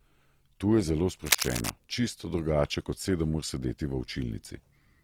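From the start and through the whole clip, the speech sounds grainy and rough, with a noisy texture where consonants and vowel tones should be clean. This is Opus compression, likely at a low bitrate around 24 kbps, with thin bands filled by folded or noise-like content.

From 1.26 to 1.72 s, a dense, uneven rustling and scratching sits over the speech at roughly the same loudness. This is likely cable scratch noise: a worn cable or connector being moved, its contact resistance jumping rapidly and injecting bursts of noise.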